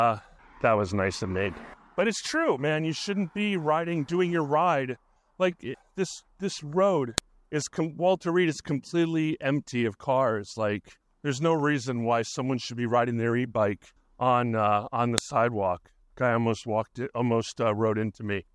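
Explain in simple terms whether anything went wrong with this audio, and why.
A file header played as audio causes sharp clicks at 7.18 and 15.18 s, where 8-second pieces were joined and leftover header bytes played as sound.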